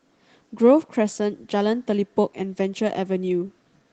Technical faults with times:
none

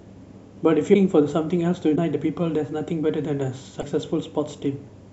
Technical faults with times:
0.93-0.96 broken MP3 bit reservoir
1.95-1.97 broken MP3 bit reservoir
3.80-3.83 broken MP3 bit reservoir

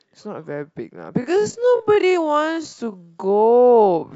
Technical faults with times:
1.16-4.16 time-stretched section

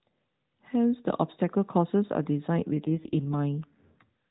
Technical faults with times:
2.55-3.71 AMR rate drop

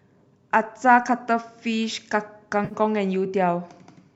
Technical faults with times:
2.65-2.74 AAC frame loss with concealment

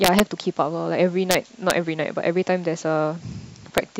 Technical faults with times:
0.04-0.20 integer overflow
1.31-1.34 integer overflow
1.70 integer overflow
3.78 integer overflow

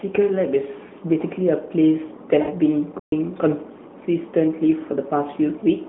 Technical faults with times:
0.88-0.91 lost AMR speech frames
2.42-2.53 lost AMR speech frames
2.99-3.12 playback stall

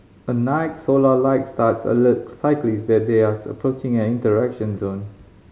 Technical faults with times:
none

